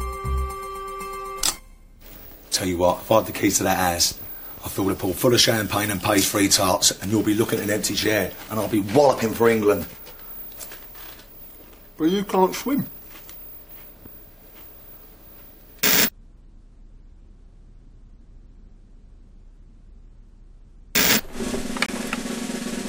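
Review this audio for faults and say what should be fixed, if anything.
Corrupt frame muted at 21.86 to 21.90 s: bit errors damaged a compressed frame, the decoder rejected it, and the player filled the gap with silence instead of decoded audio. The sound drops out abruptly for about 42 ms, a hole that fits a single lost frame, then resumes on schedule with no shift in timing. This should be fixed. Protecting the stream with error detection and retransmission, or using decoder-side concealment that interpolates across a bad frame, would prevent the hole.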